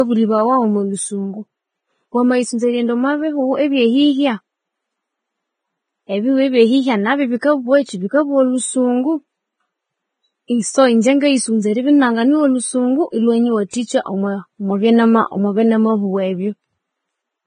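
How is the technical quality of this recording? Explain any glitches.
Technical quality is compromised by heavy codec damage across the whole speech recording, plus one brief pre-echo artefact.

Throughout, the treble is cut above 9.7 kHz and turned grainy and hissy, likely from Vorbis compression at a low bitrate around 20 kbps, coarsely quantising high-frequency detail.

At 13.71 to 13.73 s, pre-echo smears about 26 ms of hiss ahead of a sharp attack, because block-spread quantisation noise fills the quiet gap before it.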